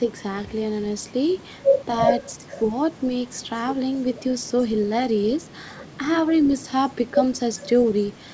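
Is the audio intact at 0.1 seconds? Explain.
No. From 0.06 to 0.13 s a faint copy of the speech arrives 395 ms late, an echo leak, likely loudspeaker pickup the echo canceller missed.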